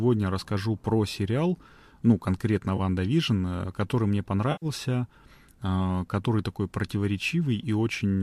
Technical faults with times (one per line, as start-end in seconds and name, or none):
2.77-2.80 AAC frame loss with concealment
4.52-4.66 AAC frame loss with concealment